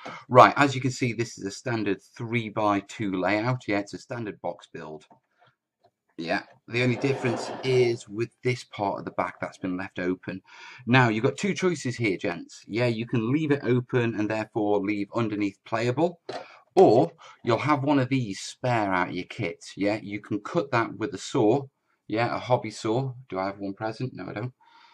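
From 3.96 to 5.80 s, 12.32 to 12.62 s and 17.05 to 17.19 s, the level abruptly falls by about 6 dB, then snaps back. The likely cause is one channel dropping out: one stereo side goes silent and halves the mono sum.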